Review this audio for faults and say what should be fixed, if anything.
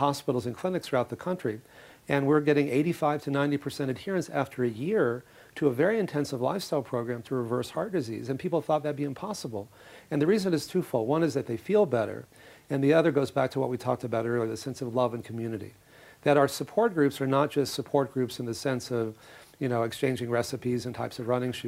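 No faults; nothing to fix.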